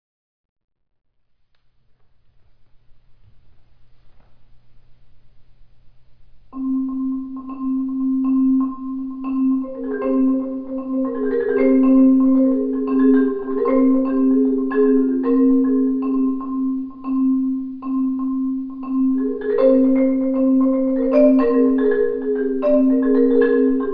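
Nothing here sounds wrong, so there's no technical fault to point out in this clip.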